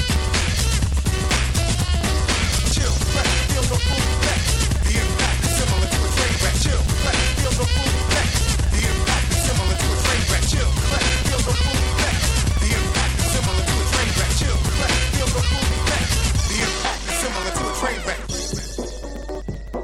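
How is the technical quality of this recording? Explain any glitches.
The recording is compromised by two faults: a continuous ticking throughout and two short decoding bursts.

Periodic USB or driver dropouts, 0.09 to 19.74 s: every 64 ms, a background task stalls the audio path and about 4 ms goes silent, producing steady ticks wherever sound is present.

Corrupt frame decoded, 3.39 to 3.42 s and at 11.58 s: damaged bits in roughly one and then a couple of compressed frames were decoded anyway, putting energy at wrong frequencies. Each is heard as a brief chirp or noise burst peaking around -10 dBFS.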